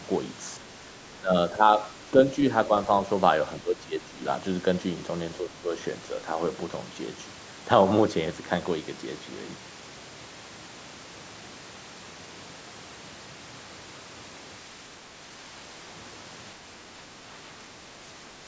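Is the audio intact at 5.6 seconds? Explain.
No. From 5.38 to 5.71 s the speech dips by up to about 10 dB, and the effect is likely speech suppressed in double talk. When both sides of a call talk at once, the echo canceller can mistake the near talker for loudspeaker echo and turn everything down. On a waveform, the envelope narrows briefly for around 300 ms. On a spectrogram, the speech bands fade during that span before returning to full strength.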